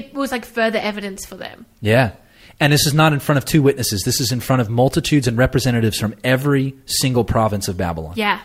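Listening to the speech in this recording, nothing stood out as a technical problem at any point.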